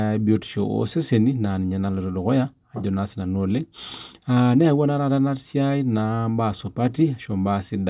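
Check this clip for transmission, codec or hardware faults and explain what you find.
Nothing to report; no fault of any kind is audible anywhere in the speech.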